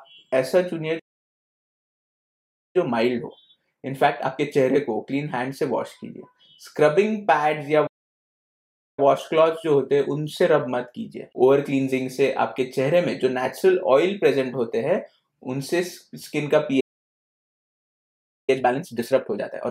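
At 0.99 s the audio cuts out mid-flow and stays silent until 2.76 s, a playback stall of about 1.75 s. The player likely ran out of buffered data or had its output thread blocked. From 2.76 to 5.76 s a time-compressed catch-up follows. The audio runs at 1.15 times normal speed with its pitch unchanged, as small segments are cut out and cross-faded to shrink the backlog.

The pattern repeats. A second stall silences the output from 7.86 to 8.99 s, about 1.11 s. Catch-up then runs from 8.99 to 11.99 s at 1.1 times speed. A third stall lasts from 16.80 to 18.50 s, about 1.68 s. The catch-up after it runs at 1.5 times speed through to the end of the clip. At that rate the audio is hurried.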